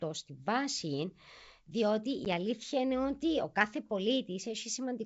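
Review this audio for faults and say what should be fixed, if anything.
There's a packet loss on an ADPCM call at 2.25 to 2.27 s, right after "στη βάση διότι" and before "η αλήθεια είναι ότι." About 10 ms drops to hard silence, roughly one packet. The decoder's predictor and step size lose track of the sender's, so the speech comes back slightly distorted before settling. Wideband G.722 coding still sounds clear, with only a light hiss in the upper band. Adding packet loss concealment and a decoder state reset on loss would fix it.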